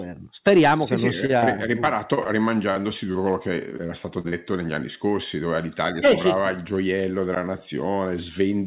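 After "sì che sì non", from 1.26 to 3.17 s, repeated packet loss turns the speech choppy and robotic: 13 short gaps, the longest 47 ms, are bridged by stretching the preceding sound. A second burst runs 3.71 to 4.34 s, ending before "negli anni scorsi dove", all beneath a band-limit at 4 kHz consistent with a G.711 call path.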